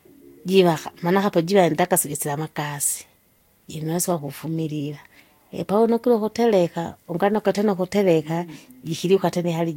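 Throughout this speech recording the sound is swirly, hollow and smeared, consonant attacks blur, and nothing reaches above 16.6 kHz. This is likely generation loss: repeated lossy re-encoding, about three passes that fit Vorbis near 65 kbit/s, each adding fresh quantisation noise.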